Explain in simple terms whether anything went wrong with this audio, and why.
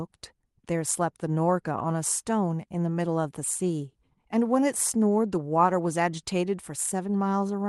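Nothing went wrong here.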